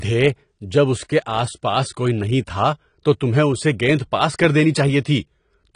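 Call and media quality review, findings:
Speech dull and band-limited throughout, nothing above 10.1 kHz, codec smearing plainly audible. Likely AAC compression (AAC-LC), fitting a 32 kbps encode. Coding damage, not a clean low-pass.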